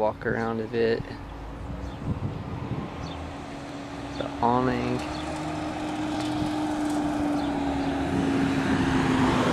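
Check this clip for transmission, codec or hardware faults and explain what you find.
Three short skips, evenly spaced, point to audio missing between chunks. At 3.69, 6.15 and 8.60 s, around 50 ms of sound vanishes and the two sides butt together with no silence. The regular spacing, about every 2.5 s, fits a process likely losing a slice at each chunk boundary. Unlike a dropout, no gap of silence is heard.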